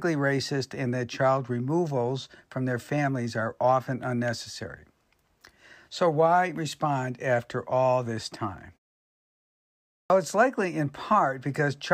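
A clipped start after a pause comes at 10.05 to 10.1 s, right on the phrase "it's likely in". The 1.35 s of silence before it let the output device go idle, and it needed roughly 50 ms to wake and resume playback, so the opening of the phrase is swallowed. The sound jumps in abruptly out of silence without its first sounds, while the quiet stretch beforehand is simply a muted pause.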